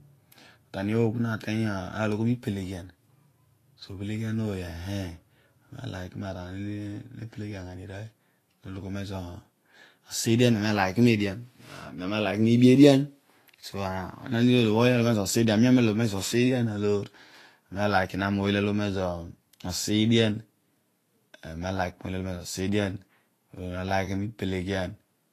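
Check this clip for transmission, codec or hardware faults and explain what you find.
A single codec fault runs throughout the clip. Likely Vorbis compression at a low bitrate, around 33 kbps: the encoder removes everything above 14.2 kHz and coarsely quantises the treble, leaving the speech hissy and grainy with blurred attacks.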